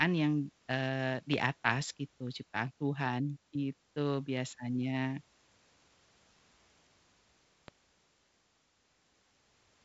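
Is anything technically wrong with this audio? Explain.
Yes. There is a loud pop at 1.34 s and again at 7.68 s. Each is a single sharp pulse roughly 10 dB above the speech, most likely from a sudden voltage step such as a connector being disturbed, a switch or a static discharge. The step lands on top of the signal and the following circuitry shapes it into a brief thump, while the speech continues underneath. The G.722 wideband telephone coding leaves nothing above about 7.7 kHz with a faint upper-band hiss, and it runs in its 56 kbit/s mode.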